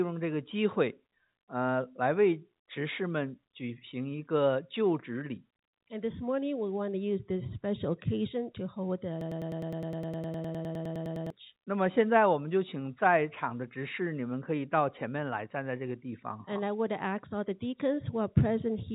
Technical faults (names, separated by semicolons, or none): broken-record loop